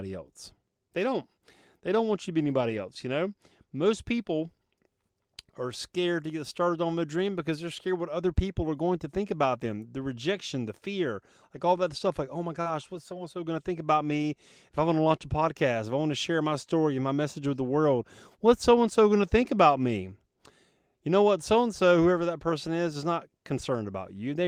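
Speech, with lost packets rebuilt from error correction at 2.41–2.79 s, 12.66–12.72 s, 14.10–14.24 s, 15.12–15.14 s and 22.12–22.22 s. Low-bitrate copies carried in following packets replaced the missing audio, so there's no gap. Instead those stretches sound rougher and noisier, with a grainier, less defined texture on a spectrogram. At 12.61–12.68 s, just before one of those repairs, there is also short concealed packet loss. About 40 ms never arrived and the decoder filled it by extending the preceding sound, so it comes through as a brief smear or wobble. On a spectrogram that shows as stretched-out, repeated harmonics or smoothed noise before the waveform blends back into the real signal.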